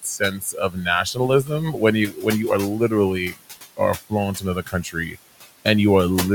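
Noise suppressor artifacts run through the whole clip. The room noise, sitting about 16 dB below the speech, is pushed down by about 17 dB frame by frame, so the residue sinks between phrases and rises under the speech. From 0.03 to 2.26 s, just before "you are", there is speech cut by the noise suppressor. The suppressor mistakes quiet speech for background and turns it down by up to about 14 dB, roughly 0.7 s in total, so soft sounds come out swallowed. The same happens from 4.1 to 5.16 s, dropping by up to about 16 dB across about 0.4 s.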